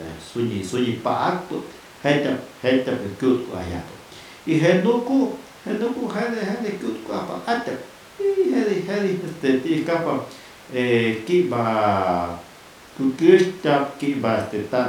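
No technical faults can be heard anywhere in the recording.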